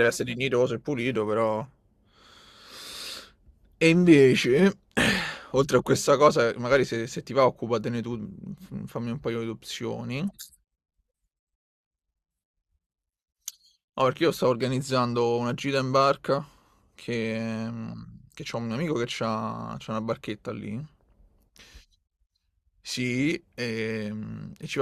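No faults are audible anywhere in the speech clip.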